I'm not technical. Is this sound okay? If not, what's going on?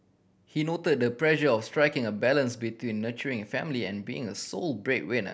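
Yes, this sound is okay, and nothing is going wrong in it.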